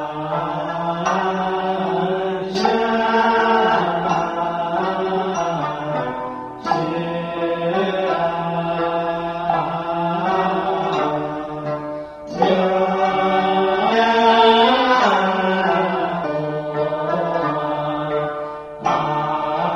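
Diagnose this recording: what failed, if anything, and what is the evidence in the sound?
The failure is in the codec stage: damaged data in a compressed stream. Four short blips are heard, at 4.04 s, 5.34 s, 13.91 to 13.93 s and 16.23 s, each lasting 20 ms or less. At these points the decoder is fed corrupt bytes, misdecodes or discards the affected frames, loses frame sync and scans for the next valid header. The brief interruption and garbled reconstruction produce the glitches in the sound.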